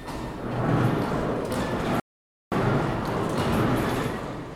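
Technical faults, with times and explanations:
2.00–2.52 s, rebuffering stall: the player drained its store of downloaded audio and had nothing left to play, so it halted and waited for more data to arrive before carrying on. To the ear, the sound drops abruptly into silence for about half a second, then picks up at exactly the point where it broke off. No audio goes missing; the gap simply inserts roughly 0.52 s of dead air into the timeline.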